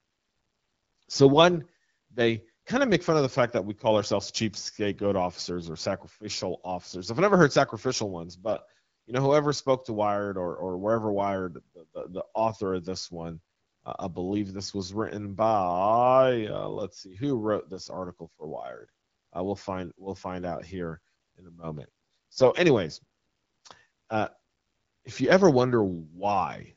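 From 1.10 to 1.20 s, just before "one they kind of", AMR bit errors break up the voice. Corrupted low-priority bits in the AMR wideband stream, at a rate of a few percent, misplace excitation pulses and skew pitch, gain and spectral detail. The voice keeps its pitch and level but turns hoarse and gargly.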